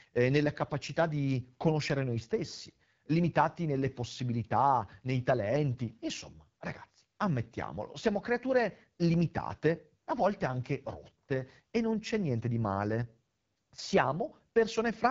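From start to finish, the speech passes through an AMR wideband (HD Voice) codec. The damage is plain. Voices sound rough and raspy, which fits one of the codec's lowest rates, near 8.85 kbit/s. At that rate the pulse-driven model of the vocal tract has too few bits to shape each sound well. Nothing is heard above about 7.6 kHz. The top band carries shaped noise rather than real detail.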